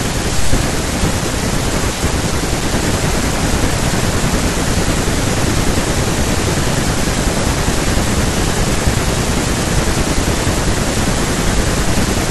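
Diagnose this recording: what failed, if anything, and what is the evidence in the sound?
Nothing in the chain from capture through conversion, transmission and playback shows any sign of failure: the speech signal remains continuous and stable in level throughout, with no audible disturbance attributable to any stage.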